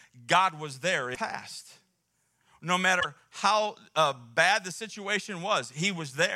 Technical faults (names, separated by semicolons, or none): damaged data in a compressed stream